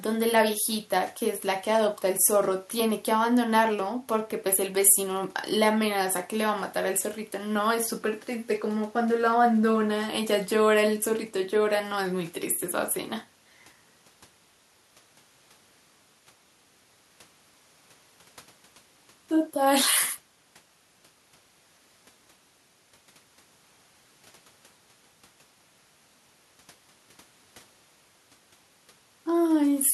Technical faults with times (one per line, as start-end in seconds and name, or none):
none